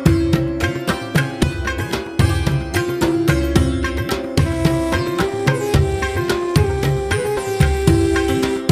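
Compressed frames are skipped at 1.42 s and 7.36 s: the audio jumps ahead by roughly 50 ms each time, which fits about two 23.2 ms frames being lost or rejected by the decoder.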